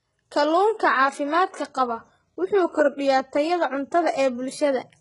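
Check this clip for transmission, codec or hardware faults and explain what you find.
One codec fault runs through the whole recording. The treble is synthetic and gritty, with nothing above 11.1 kHz. S sounds turn metallic and lispy. The likely cause is heavy HE-AAC compression, which fits a bitrate near 12 kbps. The treble is rebuilt by copying lower bands upward.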